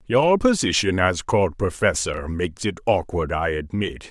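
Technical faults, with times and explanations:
2.14 to 2.18 s, chunks out of order: one 10 ms slice of speech plays three slices late, after the audio that should follow it. Nothing is missing, but the sequence is scrambled. That leaves three hard joins, heard as a brief jumbled stutter.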